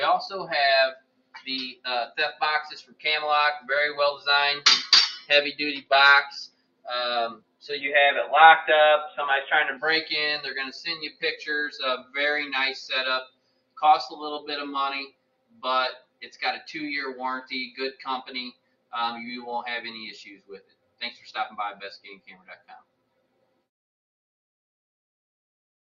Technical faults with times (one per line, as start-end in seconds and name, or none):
0.00-25.99 noise suppressor applied to music or sounds
0.95-3.69 sound cut by the noise suppressor
5.22-7.65 sound cut by the noise suppressor
7.81-9.77 input switched to a poorer device
11.11-12.15 sound cut by the noise suppressor
13.25-13.78 sound cut by the noise suppressor
15.08-16.39 sound cut by the noise suppressor
17.93-18.93 sound cut by the noise suppressor
20.31-23.64 sound cut by the noise suppressor